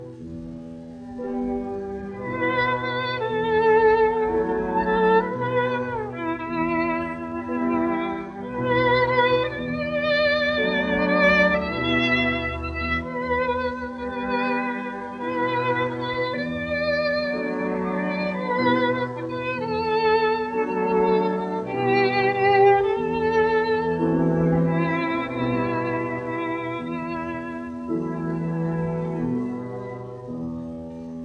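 Nothing is technically wrong with this audio.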